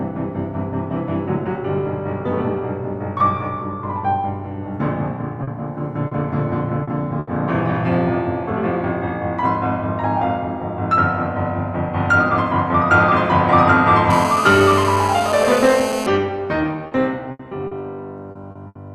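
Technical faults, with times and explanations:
5.43–5.50, 6.07–6.14 and 6.83–6.90 s, short concealed packet loss: three 40 ms holes in the music, each patched by extending the preceding sound and then crossfading back to the real signal. The result is a brief smear or wobble where detail is lost.
7.19–7.30 s, burst of packet loss: about 80 ms of consecutive audio failed to arrive in time. The decoder held the last sound and faded it out, producing a short sustained buzz or decaying hiss before playback jumps ahead, skipping the missing material.
14.10–16.07 s, GSM phone buzz: a nearby 2G handset in a call pulses its transmitter 217 times a second, and the audio electronics rectify those pulses. The result is a steady, harsh 217 Hz buzz rich in harmonics, sitting about 6 dB below the music.
16.87–18.78 s, repeated packet loss (robotic sound): six gaps in under two seconds, 320 ms in total and the longest 80 ms, so about 17% of the stretch is concealment. 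The holes follow each other closely, so the music turns choppy, with fragments missing.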